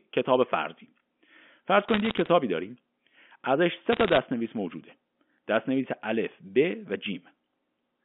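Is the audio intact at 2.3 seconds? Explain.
Yes, but only just. A burst of bit errors on a digital phone line runs from 1.89 to 2.28 s. Flipped bits on the G.711 line each corrupt one sample, and hits on high bits give sharp ticks that build into crackle, at a rate near 0.7%. Unlike clipping or dropouts, the sound between ticks stays unchanged.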